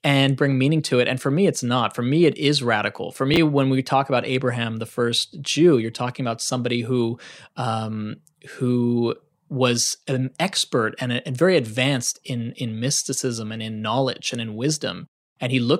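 At 3.34 to 3.37 s the speech shows chunks out of order: a single 10 ms block of audio was delivered late and plays two chunks after its proper position, behind the two blocks that should have followed it. No audio is lost, but the sequence is scrambled across those 30 ms and the rearranged blocks meet at three hard joins. It is heard as a brief jumbled flicker in the speech.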